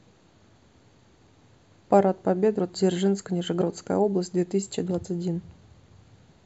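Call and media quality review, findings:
Compressed frames skipped in speech, at 2.58 s, 3.60–3.62 s and 5.04 s. Decoder jumps ahead, losing roughly 200 ms at the first and about 70 ms at the others, which fits whole 23.2 ms frames. There is no silent gap, unlike a dropout.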